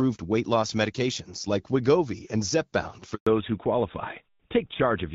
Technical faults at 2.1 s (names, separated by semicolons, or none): none